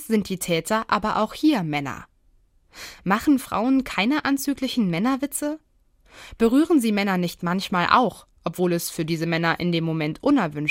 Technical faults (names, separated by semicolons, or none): none